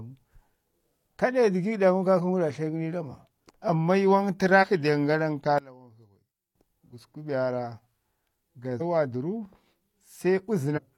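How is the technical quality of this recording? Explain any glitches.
The recording has two kinds of technical fault: three brief skips in the speech and one short passage where the level collapses.

Compressed frames skipped occurs at 4.59 s, 8.77 s and 10.73 s. At each point the decoder never plays a run of frames, either because they were missing or because it rejected them as corrupt, so the speech jumps forward. About a tenth of a second is lost at the first two points and roughly 150 ms at the last.

From 5.58 s to 6.55 s the speech drops by about 20 dB. The likely cause is one channel inverted. With one stereo channel's polarity reversed, summing to mono cancels whatever the two channels share, which removes the centred speech. Only the small difference between the channels remains, so for just under a second the speech becomes a faint trace.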